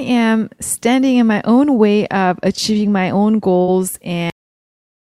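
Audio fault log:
3.61 to 3.70 s, burst of packet loss: a run of packets never arrived in time, so the receiver stretched the last bit of speech for roughly 60 ms, fading it out, then jumped ahead, dropping about 60 ms of what was said.
4.30 s, cut-off end: the speech just stops mid-sound and falls straight to dead digital silence, with no natural decay. The final stretch of buffers was never written or played out, so nothing comes after that point.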